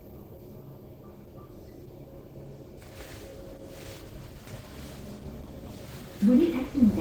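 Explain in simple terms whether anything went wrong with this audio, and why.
Something did go wrong: the audio was squeezed hard to save space, most likely by Opus compression working in its mixed speech-and-music mode. With so little room, the encoder can't store the fine detail of each sound, so it fills the gaps with invented noise. From start to finish the result is plainly audible: the sound comes across rough, grainy and hissy, with a hoarse, muffled quality where it should be clean.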